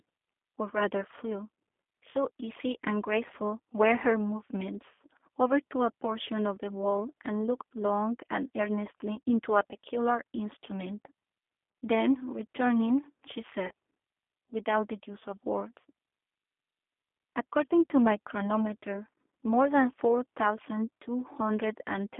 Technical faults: G.729 codec; VoIP packet loss concealed by the speech codec

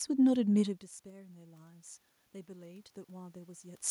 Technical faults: automatic gain rising

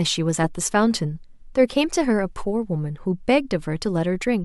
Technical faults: none

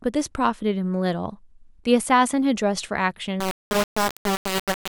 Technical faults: low bit depth without dither

